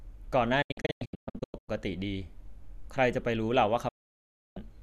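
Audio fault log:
0.62–1.69 s, digital broadcast dropout: the receiver mutes with quick 8 ms fades, leaving about 720 ms of holes scattered across this span, the longest 120 ms, as failed frames are discarded.
3.88–4.57 s, digital broadcast dropout: an almost continuous muted gap of about 670 ms, fading in 8 ms, while corrupted frames are thrown away and that audio is lost.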